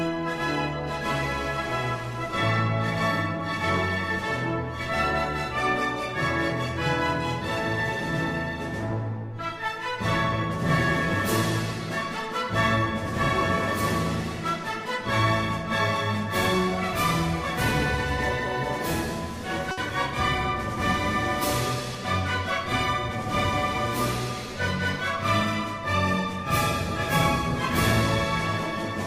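A short stall from a late packet occurs between 19.71 and 19.79 s. One packet arrived behind schedule, so the jitter buffer ran dry and the receiver kept the last sound going for 60 ms while it waited. Once the packet turned up, playback resumed exactly where it had paused, so nothing is lost. The result is a brief held smear with a slight buzz or dip, and everything after it plays 60 ms later than before.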